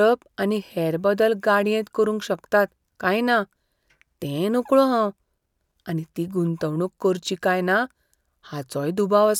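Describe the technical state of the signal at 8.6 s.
At 8.6 s the signal is intact, with no audible fault at that point.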